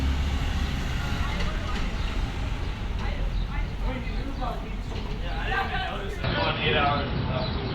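At 6.24 s the input likely switched to a poorer device: the sound abruptly dulls, losing everything above 5.6 kHz, with a small level jump and faint new background noise.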